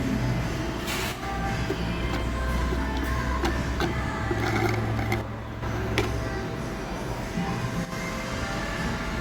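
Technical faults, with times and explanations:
1.12–1.23 s, 5.21–5.63 s and 7.85–7.92 s: one channel drops out. The level falls abruptly by about 6 dB for roughly 0.1 s, 0.41 s and 0.07 s, then returns just as suddenly. Each time, the likely cause is one side of a stereo pair going silent briefly. Once the pair is summed to mono, material shared by both channels is carried by only one, which halves its amplitude, and anything present only on the lost side vanishes until the channel returns.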